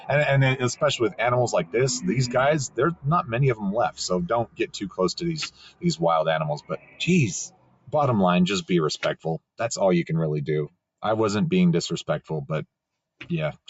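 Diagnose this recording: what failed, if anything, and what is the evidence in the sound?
The call processing stage failed. A noise suppressor made for speech stayed active on this non-speech audio, so the noise suppressor was applied to music or sounds. Level swings by roughly 15 dB. Steady tones and tails are judged as noise and pushed down. The sound pumps and thins.

The sound is cut by the noise suppressor in four dips: 4.45 to 4.99 s, 5.5 to 5.85 s, 6.56 to 7.01 s and 7.47 to 7.94 s. The deepest drops reach about 16 to 18 dB. Sustained parts sink while sudden onsets pass through.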